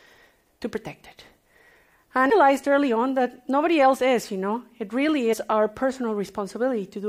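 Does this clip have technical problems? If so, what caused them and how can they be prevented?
Yes. Damaged data in a compressed stream causes two short glitches, one at 2.30 s and another from 5.32 to 5.34 s. Corrupted bytes in the compressed stream made the decoder misread the frames, lose sync and hunt for the next valid header. On a spectrogram each event shows as a thin vertical break. On the waveform it appears as an abrupt, jagged discontinuity. To prevent it, carry the stream with checksums or error correction and verify files after transfer.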